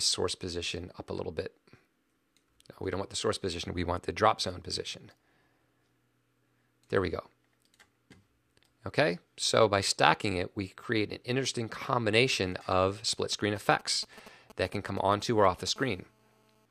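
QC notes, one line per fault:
13.32 to 15.70 s, GSM signalling bursts: a galloping dit-dit-dit of short raspy buzzes, roughly 20 dB below the audio, from a nearby 2G phone sending brief groups of radio bursts as it signals to the network. The audio circuitry rectifies each burst, so the pulses repeat at about 217 Hz within each group. The stop-start rhythm separates it from a steady call buzz, and the 217 Hz rate separates it from 50 or 60 Hz mains hum.
15.76 to 16.66 s, GSM phone buzz: a hard, continuous, raspy buzz at about 31 dB below the audio. This is a nearby 2G phone in a call, transmitting a burst 217 times a second without gaps. Rectifying that pulse train gives a 217 Hz fundamental with a dense series of harmonics that follows nothing in the audio. The buzz is unbroken, unlike the galloping groups just before it. Its harsh, buzzy edge and 217 Hz pitch distinguish it from smoother mains hum.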